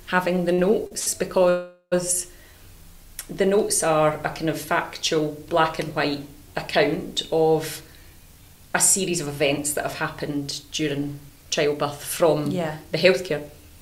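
Short stalls from a late packet occur at 0.53, 0.87 and 0.99 s. Each time the jitter buffer emptied, so the receiver held the last sound for about 45, 42 and 75 ms respectively, giving a brief smeared hold with a faint buzz. Nothing is lost, as playback resumes where it stopped.

A call audio freeze runs from 1.49 to 1.94 s. The sound stops advancing and the last moment is extended as a fading buzz for about 0.42 s, including roughly 60 ms of silence, before continuing intact. Packets held up in transit are the likely cause.

Jitter buffer speed-up runs from 7.80 s to 13.78 s. With excess audio queued, the receiver repeatedly trimmed pitch-period-sized slices to reduce delay, playing about 6% fast at unchanged pitch and removing around 0.4 s in total, so the sound feels slightly rushed.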